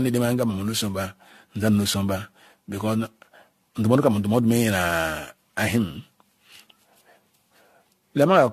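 From start to finish the speech has a swirly, smeared, hollow character, consonant attacks blur, and nothing remains above 14.4 kHz. What sets this apart from a single low-bitrate encode is that the damage is heavier than that ceiling and rate would explain. The likely cause is generation loss: the audio was re-encoded around seven times, in a way that fits AAC-LC at 64 kbit/s. Each pass quantised afresh on a shifted frame grid, so noise and spectral holes piled up.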